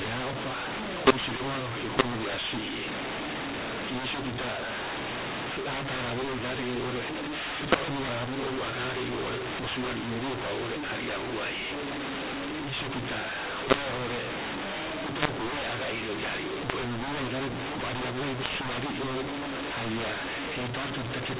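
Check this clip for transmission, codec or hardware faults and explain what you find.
One fault runs throughout: mu-law and A-law mixed up. The speech was coded with G.711 A-law but decoded as mu-law, so every 8-bit code lands on the wrong logarithmic level. Loud and soft samples get scrambled and the quietest are lifted well above silence, making the speech harsh and distorted with noise filling the pauses, all inside the telephone band that ends at 4 kHz.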